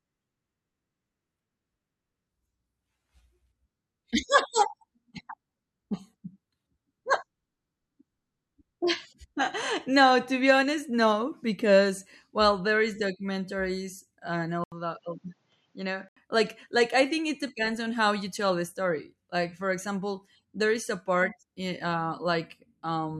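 At 14.64 s the speech drops out for 80 ms, then returns duller and somewhat quieter, with nothing above 7.6 kHz and a faint new background noise, until 16.17 s. The likely cause is the input switched to a poorer device with a narrower-band microphone path.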